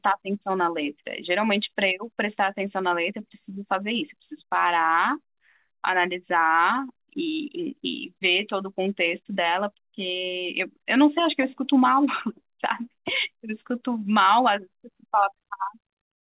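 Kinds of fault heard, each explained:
No technical fault can be heard in the speech, which carries nothing above 4 kHz, a telephone-band limit that fits its passage through a narrowband call codec such as G.711 mu-law at 64 kbps.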